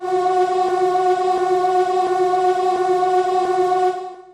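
From start to finish the audio sounds dull and gurgling, with a granular, watery roughness, and this is likely MP2 compression at a low rate, with damage that fits something around 80 kbps. Starved of bits, the Layer II encoder switches off whole upper sub-bands and quantises the remaining ones coarsely. On a spectrogram the top end looks ragged, with blocks of high-frequency energy flickering in and out between frames and hard horizontal gaps where bands drop away.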